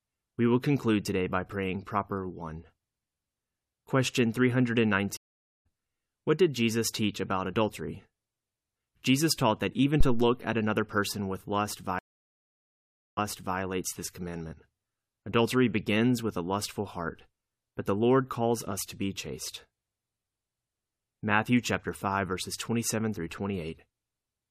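A speech recording with two stream reconnects: at 5.17 s the audio drops out for 484 ms and resumes roughly a third of a second later, and after "another person with lust" at 11.99 s a 1.18 s gap ends 418 ms earlier at "this commandment", both from the connection dropping and a fresh decoder restarting. A phantom power thump at 10.01 s, between "taught that even" and "at another person with", decays over 76 ms as a supply step hits the input's coupling capacitors.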